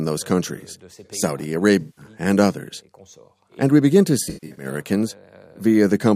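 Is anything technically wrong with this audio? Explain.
Yes. AAC frame loss with concealment occurs at 1.80–2.05 s and, more scattered, at 4.23–4.65 s. The decoder patches missing frames from the last good spectrum, leaving smeared, phasey gaps, with runs of up to about 150 ms in the second event.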